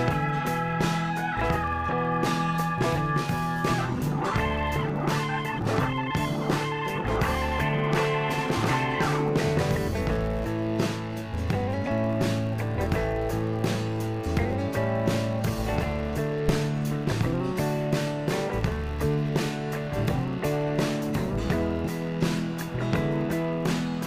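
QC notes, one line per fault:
throughout, filter restarted on every block: a level-following buzz near 93.8 Hz, as each block restarts from silence with a small transient, which fits 512-sample blocks.
16.48–16.64 s, phantom power thump: a deep thump decaying over 34 ms, as a supply switching on or off on the live input steps through the coupling capacitors.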